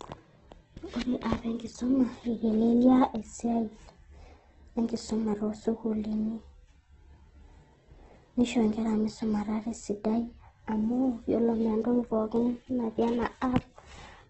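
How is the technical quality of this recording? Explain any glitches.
Quality's poor, honestly: the whole recording carries heavy Opus compression damage. From start to finish, nothing comes through above 8.1 kHz, and the speech sounds rough and grainy rather than swirly. That's likely Opus in its music mode starved of bits, which fits a very low rate around 12 kbps. It keeps each band's energy but fills the detail with folded copies or noise, so the top end is dull and the texture turns gritty.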